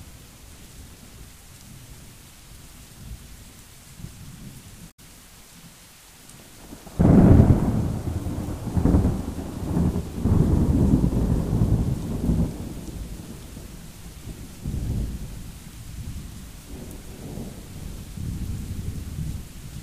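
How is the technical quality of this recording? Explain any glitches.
One glitch stands out. At 4.87 s there is a short burst of damaged data in a compressed stream, lasting about 0.12 s until 4.99 s. Part of the encoded data there is corrupt. The decoder cannot read those frames properly and loses its place in the stream. It then hunts for the next valid frame header to resume decoding. You hear this as a brief chirp, squawk, click or short hole in the sound.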